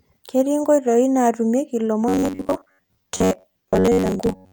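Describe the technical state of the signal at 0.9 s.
At 0.9 s the speech signal is intact, with no audible dropout, distortion, or other fault at that moment.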